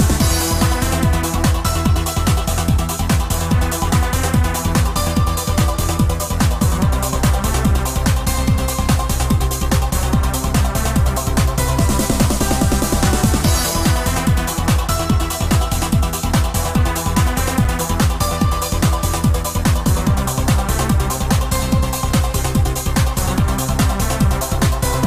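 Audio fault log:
17.64 s, block of digital silence: a single sharp tick, too brief to register as a hole, with the sound dropping out for about 5.8 ms and snapping straight back. A run of samples was replaced with zeros, most likely because the program failed to refill its output buffer in time; the length fits a 256-sample buffer. The cut to silence and the return both happen with no fade, so each edge is an abrupt jump that fuses into one click.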